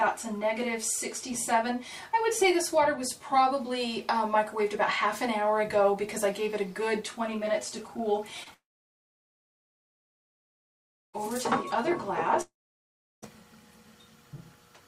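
A short concealed packet loss hits at 8.43 to 8.48 s: about 20 ms never arrived, so the decoder stretched the last sound across the gap as a brief smear. Right after, the audio fades into near silence from 8.54 to 11.15 s and again from 12.41 to 13.24 s. That's likely a long network dropout each time, losing about 2.6 s and 0.8 s.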